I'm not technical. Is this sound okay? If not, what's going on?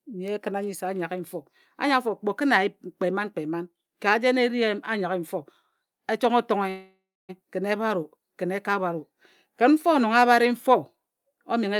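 No. From 6.69 to 7.31 s the speech stalls. The last sound is stretched into a fading buzzy hiss, then there is roughly a quarter-second of silence before the talking picks up exactly where it stopped. This is a call audio freeze, likely caused by a brief hold-up in the network: the receiving end ran out of audio and filled the wait itself. No speech is lost, but everything after it arrives about 0.6 s later.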